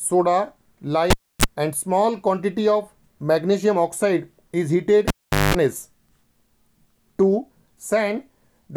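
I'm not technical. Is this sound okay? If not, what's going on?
No. Twice, a cable is pulled and plugged in while the sound is live, at 1.10 to 1.45 s and again at 5.08 to 5.55 s. Each time there is a pop, then near silence while the plug is out (about 0.3 s, then 0.42 s), then a short 50 Hz mains buzz as only the plug's tip touches. The buzz lasts 0.03 s the first time and 0.2 s the second. A second pop follows as the sound returns.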